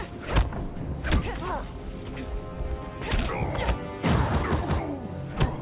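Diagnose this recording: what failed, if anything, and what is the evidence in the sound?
Nothing failed: no stage of the chain leaves an audible defect anywhere in the recording.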